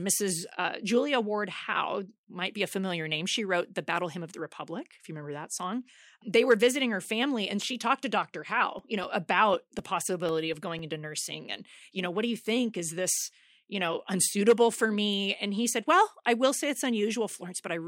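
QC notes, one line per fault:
8.79–10.79 s: periodic USB or driver dropouts. Regular ticks every 0.25 s, around ten in all, ending just before "into nursing and you". Each loses roughly 2 ms of speech to silence as the bus or driver stalls briefly.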